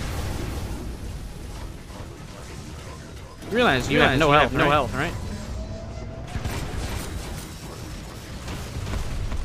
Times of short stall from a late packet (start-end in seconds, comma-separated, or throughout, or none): none